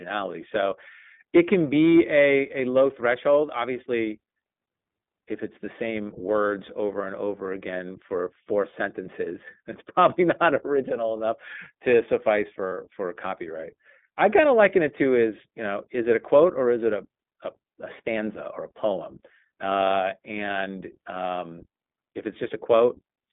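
Throughout, the speech sounds thin and slightly rough and synthetic, with nothing above 3.6 kHz and little below 200 Hz. This is the iLBC codec, a narrowband VoIP coder that codes each frame's excitation independently. The plainly audible damage fits its 15.2 kbps mode with 20 ms frames.

At 12.69 to 12.73 s, between "enough to suffice" and "for a copyright I", a brief buzzy, held vowel sound replaces the speech. These are lost iLBC frames. The decoder filled the 40 ms gap, which fits two missing 20 ms frames, by repeating the last pitch cycle mixed with noise. Because each frame stands alone, the speech recovers at once.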